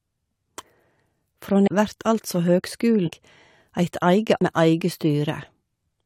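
Speech, with damaged data in a compressed stream. Short glitches occur at 1.63 to 1.68 s, just before "vert altså", and at 4.37 to 4.42 s. Corrupted bytes there make the decoder misread frames and lose sync until it finds the next valid header.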